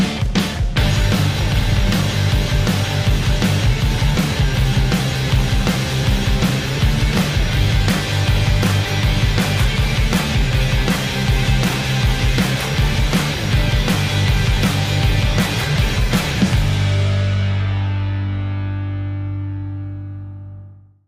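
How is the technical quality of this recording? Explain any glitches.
No glitches turn up anywhere in the recording, and the signal holds steady throughout without any dropout, distortion or other technical fault to report.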